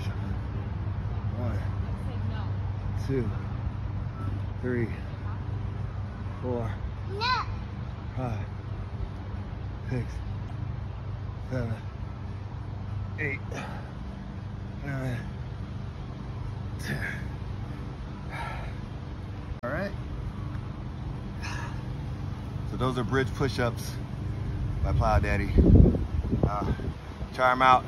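Damaged data in a compressed stream appears twice, at 10.47 to 10.52 s and at 19.58 to 19.64 s. Corrupted bytes make the decoder misread those frames and hunt for the next valid header, so each spot is a brief glitch of about 50 to 60 ms cutting through the audio.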